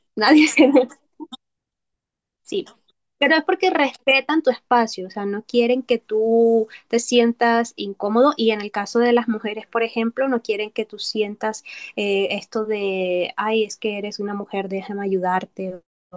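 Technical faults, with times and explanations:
No technical faults can be heard anywhere in this recording; the signal stays steady and intact throughout.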